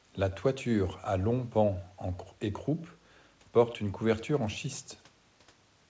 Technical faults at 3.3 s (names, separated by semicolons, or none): echo with no canceller